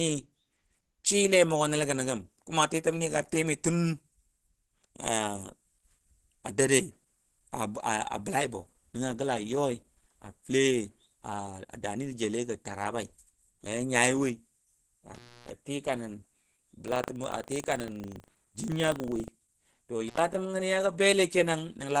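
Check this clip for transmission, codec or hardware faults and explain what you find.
Three problems in this speech clip, one running the whole way through and two that come and go.

Low-bitrate audio saved at a high bitrate: throughout, the artefacts of the first encoding are still there. It's likely a very low-rate source, around 16 kbit/s Opus, re-saved as a big MP3 that can't restore what was lost.

Intermittent contact: at 15.14 to 15.5 s the sound drops out for about 283 ms, and at 20.08 to 20.20 s for about 78 ms. A loose connection briefly opens, giving crackly edges around near-silence.

Buffer tearing: from 16.84 to 19.32 s there's a rattly 25 Hz buzz. The writer and reader of the audio buffer overlap each cycle, splicing in a small slice of audio about 70 ms old.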